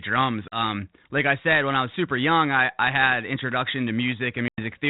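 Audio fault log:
0.48–0.58 s and 4.48–4.62 s: packet loss on an ADPCM call. About 40 ms, then 100 ms of the G.726 stream went missing, which fits roughly two and then five packets. Silence filled each hard-edged hole, the first ending just before "like I said when". The decoder's adaptive predictor and step size lost track of the sender's, so the sound resumes slightly distorted before resettling.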